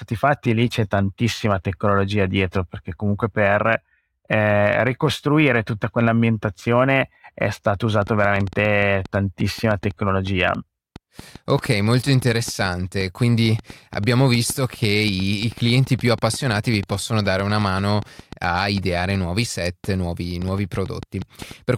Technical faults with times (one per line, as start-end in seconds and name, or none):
8.02-21.52 train of clicks